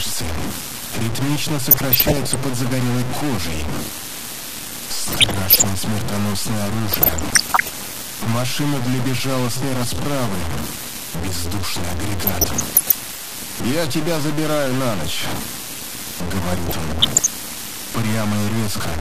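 From start to finish, the signal was most likely cut to very few bits by simple truncation with no dither, consistent with about 3 bits. The rounding error tracks the waveform and sits nearly as loud as the sound itself, so everything carries a coarse, grainy distortion that shifts with the material. Quiet passages break up into sputtering between a couple of steps or fall away to silence.

Running alongside that is MP2 compression, pointing to a low rate around 80 kbps. With too few bits to go around, the encoder drops the upper sub-bands and quantises the remaining ones crudely. The result is a dull, band-limited tone with a gurgling, granular texture, and the top end audibly flickers in and out as bands switch on and off.

On top of this come five bursts of DAB burbling, at 1.71 to 2.36 s, 5.12 to 5.69 s, 6.88 to 7.71 s, 12.22 to 12.94 s, and 16.52 to 17.27 s, each lasting well under a second. 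Bit errors in the coded stream get past error correction, so wrong samples put short blips of noise into single sub-bands, and wrong scale factors make sub-bands jump in level for up to a frame. These spans add bubbling, watery blips laid over the already degraded sound.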